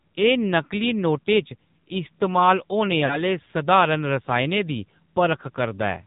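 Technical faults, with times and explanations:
Throughout: AMR narrowband mobile codec. The speech is squeezed into a band with nothing above 4 kHz, so it sounds thin and muffled. The codec rebuilds the voice from a vocal tract model fed by a few pulses per short sub-block. At this low rate, which fits the 7.4 kbps mode, that model is coarse. The damage is plainly audible as a buzzy, synthetic edge on the speech.
3.06 to 3.21 s: lost AMR speech frames. The sound briefly stretches out, then sags and thins before normal speech returns at 3.21 s. The span points to about two lost frames, some 40 ms of missing audio. The decoder fills the gap by repeating the last good pitch and vocal tract settings at falling gain. That is why it smears and fades rather than cutting off. The speech comes back weak or rough for a moment.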